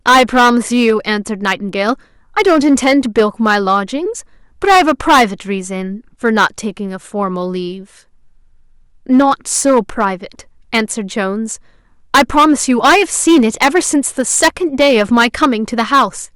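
Hard clipping runs through the whole recording: the speech reaches a stage that cannot pass its full level, driven roughly 14 dB past that stage's ceiling, so the peaks are sliced flat. Only a few percent of samples hit the limit, but those flattened tops throw energy into high harmonics, and every loud syllable carries a harsh, buzzy crackle rather than a clean edge.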